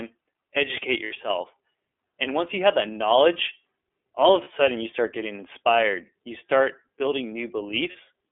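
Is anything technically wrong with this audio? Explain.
Yes. The speech carries iLBC codec coloring throughout: the band stops sharply near 3.5 kHz and below 300 Hz, and each frame is coded independently at a low rate, so the voice is plainly rough and synthetic. On a spectrogram this shows as a flat ceiling near 3.5 kHz with smeared harmonics.

There are lost iLBC frames at 1.05 to 1.12 s (about 60 ms, which fits two 30 ms frames), at 4.44 to 4.48 s, and at 7.92 to 7.96 s. The decoder repeats the last pitch cycle mixed with noise, so each gap is a brief buzzy, held vowel. In the waveform these spans appear as copied periodic cycles, and the spectrogram shows steady, blurred harmonics before normal speech returns almost at once.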